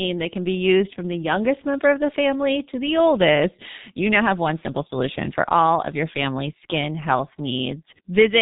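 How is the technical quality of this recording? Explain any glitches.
Poor, because heavy codec damage runs through the whole recording.

G.723.1 codec, present from start to finish: the speech has been squeezed through a low-rate telephony coder that rebuilds it in coarse 30 ms frames from a slowly updated model of the vocal tract. The result sounds muffled and hoarse, with smeared consonants, and the thinness fits a rate of around 6 kbit/s. On a spectrogram, energy stops abruptly at about 3.8 kHz, leaving an empty band above, and harmonics look blocky rather than smoothly tracked.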